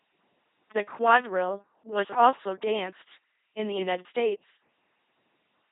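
Speech here has gone through an LPC-10 vocoder for its whole length, and it's heavily mangled. At 2.4 kbit/s the codec throws away the real voice source and rebuilds each moment with a short all-pole filter fed by either a buzzy pulse train or noise, all or nothing. That's why it sounds like a flat, mechanical robot with buzz and hiss in the wrong places. Nothing reaches above about 3.8 kHz, so it's dull too.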